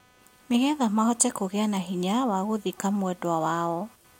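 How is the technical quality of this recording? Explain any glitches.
The recording has one fault running through it: computer activity noise. Shifting load in the computer's processor, graphics card or mouse moves the ground shared with the audio circuit. Across the whole speech clip that injects a faint buzz pulsing at roughly 300 times per second, sitting far beneath the speech at about 35 dB down and rising and falling with the computer's activity rather than with the talking.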